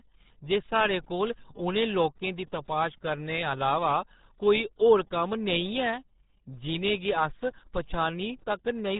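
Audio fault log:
throughout, RealAudio 14.4 codec: speech sounds muffled and gargly with nothing above 3.8 kHz, which fits RealAudio 1's 8 kbit/s dial-up coding squeezing it hard.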